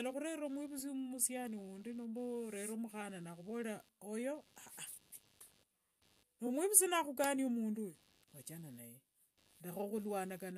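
Throughout the speech, a faint computer activity noise buzzes at around 100 pulses a second, roughly 35 dB below the speech. Processor and peripheral load disturbing the shared audio ground causes it. It wanders with the computer's activity, unlike steady mains hum.

From 6.46 to 6.48 s, just before "nakhukania mundu oyo wachana", repeated frames replay a 23.2 ms block once, which points to a single duplicated compressed frame. It is heard as a brief stutter and adds 23.2 ms, rather than the gap a dropout would leave.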